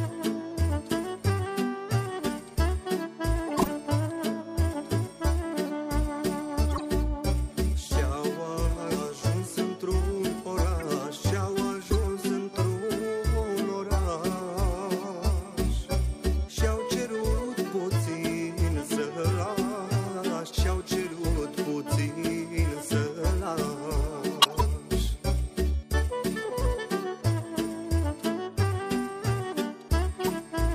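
Corrupt frames were decoded: flipped bits in compressed frames were played anyway, misplacing energy across frequencies. This produces brief chirps or noise bursts at 3.47–3.68 s, 6.70–6.84 s, 10.80–10.84 s, 11.86–11.95 s, 24.40–24.62 s and 30.21–30.33 s.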